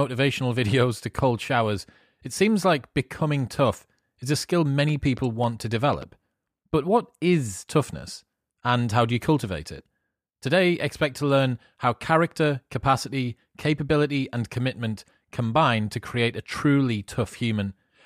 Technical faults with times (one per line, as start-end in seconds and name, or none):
4.89-6.03 train of clicks